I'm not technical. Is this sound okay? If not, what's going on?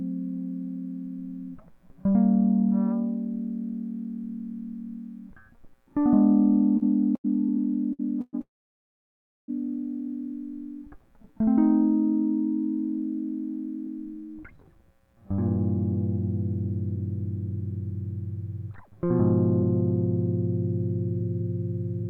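No. Between 6.77 and 8.35 s the connection delivered the audio in uneven bursts, so the player kept running out and had to stretch the last bit of sound four times, with the longest pause 0.12 s. This repeated stalling, or stutter, makes the music drag and hiccup.

From 8.41 to 9.50 s there is a call audio freeze, likely because the audio data was held up on the way and the player's reserve ran dry. The music stops, and about one second of that is silence. It then resumes where it left off, so nothing is lost, only delayed.

From 13.86 to 19.64 s a jitter buffer speed-up occurs. The player had built up too much stored audio and trimmed many tiny slices to catch up, roughly 0.4 s in all. The music plays about 7% fast at the same pitch, so the tempo feels rushed and unsteady.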